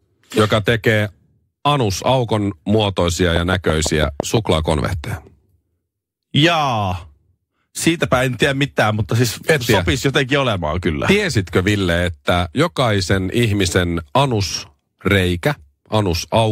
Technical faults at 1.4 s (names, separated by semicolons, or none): none